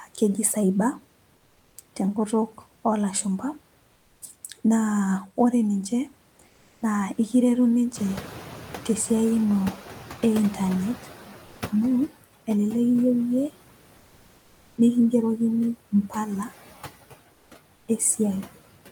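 Noise suppressor artifacts run through the whole clip. The suppressor pulls steady background down by about 19 dB, frame by frame. The noise sinks between words and rises under them.

At around 8 s the room noise jumps by about 20 dB. The noise suppressor is catching up from 7.95 s to 11.24 s. Its noise estimate lags, so the louder background first passes with only about 11 dB of cut. Over 3.3 s it gradually sinks as the estimate adapts.

At 11.45 s to 11.61 s, sound is dropped by the voice detector. The sound gives way to steady, flat noise for 160 ms, and about 120 ms of sound is lost. The likely cause is Opus discontinuous transmission treating part of the sound as background.

Comfort noise replaces the background twice near the end, at 17.33 s to 17.51 s and at 17.75 s to 17.87 s. The real room noise turns into a smooth, featureless hiss. The first patch matches the level. The second is about 3 dB quieter. 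The likely cause is Opus discontinuous transmission stopping during pauses.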